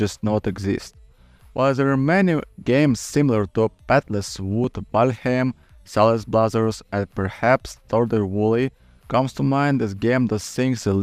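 At 4.64 s and again at 10.49 s there is a small jump in the sound, likely a dropped buffer (overrun) where a few milliseconds were overwritten and lost. Unlike a dropout, no silent gap is heard; the audio simply skips ahead.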